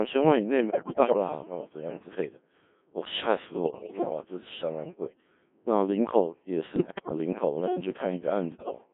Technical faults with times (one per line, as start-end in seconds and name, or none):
0.00-8.93 Codec 2 vocoder
0.70-1.17 bit errors on digital voice radio
3.64-4.10 bit errors on digital voice radio
6.76-7.18 bit errors on digital voice radio
8.52-8.78 bit errors on digital voice radio